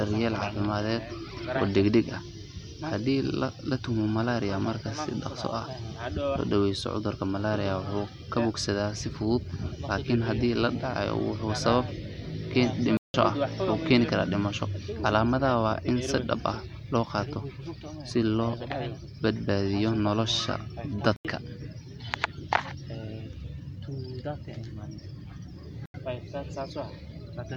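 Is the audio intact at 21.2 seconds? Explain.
No. At 21.16 to 21.25 seconds the speech drops into a block of digital silence lasting about 85 ms. That length fits a 4096-sample buffer left unfilled and output as zeros. The sound stops and restarts with no fade. This leaves a short hole.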